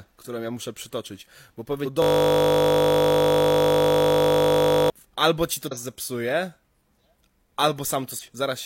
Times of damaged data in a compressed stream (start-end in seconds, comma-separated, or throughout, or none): 1.81-1.86, 5.67-5.73, 8.18-8.23